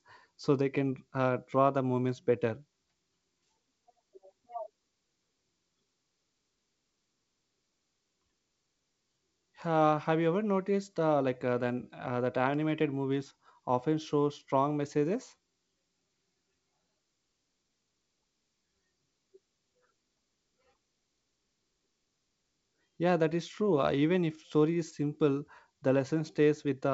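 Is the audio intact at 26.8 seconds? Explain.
Yes, the audio is intact at 26.8 seconds, with the speech carried cleanly through G.722 wideband telephone coding at 64 kbit/s and no fault audible at that moment.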